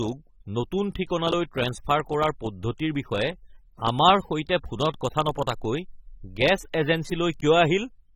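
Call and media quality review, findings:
AAC compression, throughout the speech. Plainly audible coding damage: dull, smeared speech with a fizzy edge on sibilants. Likely component: AAC-LC encoder, consistent with a low bitrate near 27 kbps. Too few bits per 1,024-line frame, so coarse quantisation and thin high bands. Spectrum stops near 18.5 kHz, so not a band-limiting fault: a plain low-pass would sound clean, not smeared.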